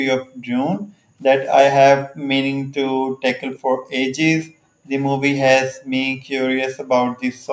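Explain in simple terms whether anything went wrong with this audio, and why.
Background gated by the echo canceller, from 0.18 to 1.21 s, 2.0 to 3.24 s, 3.59 to 4.89 s and 5.77 to 7.47 s: while the far side's sound came out of the loudspeaker, the echo canceller turned the microphone down hard, so the room sound drops away and returns when it lets go.

Echo leak, at about 3.55 s: a brief, faint copy of the speech arrives roughly 0.3 s late. This is likely leftover loudspeaker sound that the echo canceller failed to remove before sending it back.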